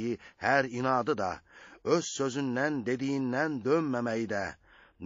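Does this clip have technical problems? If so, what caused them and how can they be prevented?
Yes. Throughout, the sound is watery and swirly, likely from MP3 compression at a low bitrate around 32 kbps, which zeroes weak frequency lines. Prevent it by encoding at a higher bitrate or keeping a lossless copy.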